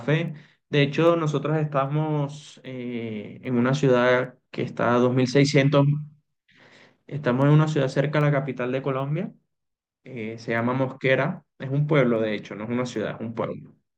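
From 0.28 s to 13.74 s the speech carries word clock ticks: brief clicks roughly every 0.7 s, about twenty in all, each a one-sample slip from a receiver clock running unlocked and drifting around 30 ppm. Unlike random crackle, they keep a steady, metronome-like spacing.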